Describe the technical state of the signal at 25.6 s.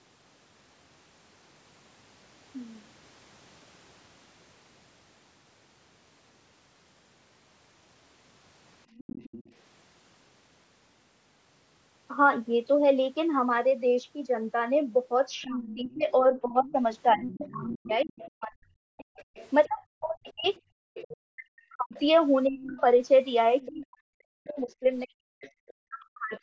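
Right at 25.6 s, three things pile up. The first is speech suppressed in double talk, which runs from 15.43 s to 26.34 s. The talker's level keeps getting pulled down in patches, around 5 seconds in total across that stretch, and at its worst it drops by something like 40 dB. The cause is likely both ends talking at once. The echo canceller can't separate the near talker from the loudspeaker echo, so it ducks everything together, and you hear the talker sink and break up.

On top of that, the other side's voice is leaking through from 25.41 s to 25.73 s. It's a faint second voice sitting roughly 25 dB under the main speech. It most likely comes from the far end playing out of the device's loudspeaker and getting back into the mic, with the canceller not scrubbing it all out. It's quiet, but it's a separate voice, not room tone.

Finally, the background is gated by the echo canceller for a brief 50 ms, from 25.55 s to 25.6 s. 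The canceller slams the mic down by about 33 dB while the loudspeaker is active, so the room sound momentarily drops out and then comes back when it releases. The call's normal mic processing caps the band at 8 kHz, and that part is expected.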